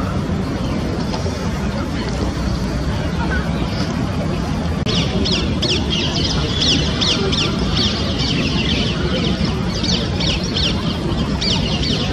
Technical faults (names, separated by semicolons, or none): overlap between stream segments